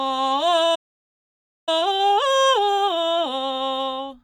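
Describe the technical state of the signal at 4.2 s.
At 4.2 s the music signal is intact, with no dropout, distortion or other technical fault audible at that moment.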